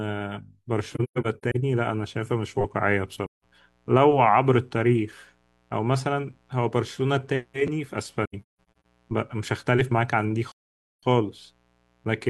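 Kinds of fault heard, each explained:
AAC frame loss with muting: Compressed audio frames went missing and the decoder replaced them with silence, so the speech fades out and back in softly. This happens at 0.94 to 1.56 s (scattered, longest hole about 150 ms), 3.25 to 3.44 s, 8.25 to 8.85 s and 10.51 to 11.03 s.
Mains buzz: Sharp switching spikes from a dimmer, rectifier or poorly shielded connection got into the signal twice per 60 Hz mains cycle, creating a dense stack of harmonics. This is heard as a steady, raspy buzz from 1.9 s to the end, about 40 dB below the speech.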